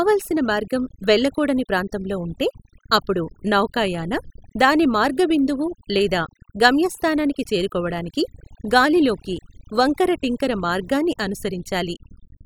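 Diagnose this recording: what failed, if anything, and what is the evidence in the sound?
Overdone noise removal in call processing, throughout: bands are gated off, leaving near-silent pauses with twinkling specks, not codec smearing.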